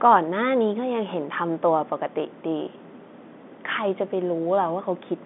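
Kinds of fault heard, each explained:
No kinds of fault are heard in this telephone-band speech.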